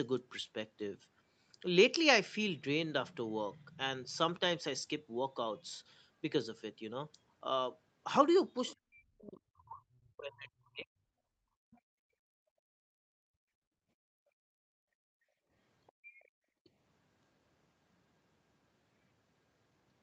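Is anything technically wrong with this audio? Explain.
Yes. The speech has echo-canceller faults on a call path.

Other side's voice leaking through occurs at 8.67–8.76, 11.71–11.79, 15.87–16.28 and 16.64–16.69 s. Faint scraps of a second voice sit roughly 25 to 35 dB below the talker, likely loudspeaker echo the canceller missed. On a spectrogram they look like weak, broken harmonic traces that don't match the main voice.

Speech suppressed in double talk runs from 8.75 to 11.25 s. For about two seconds the talker's voice dips and breaks up, falling by as much as roughly 40 dB, likely because the canceller turned everything down while both sides spoke. The waveform shows ragged, hollowed-out speech envelopes.

Background gated by the echo canceller occurs from 11.53 to 15.51 s, dropping by about 32 dB, and again from 15.92 to 16.64 s, dropping by about 31 dB. The room tone collapses while the far end plays, then returns. 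A spectrogram shows the noise floor blanking to near-black and then reappearing.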